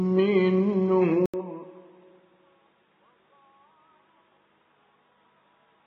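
At 1.26 s the audio breaks for 80 ms, then continues dull and boxy to the end, with nothing above 3.7 kHz, roughly 10 dB quieter, and a faint new noise floor. This is likely an input switched to a poorer device. The gap, level drop and changed noise set it apart from a simple filter change.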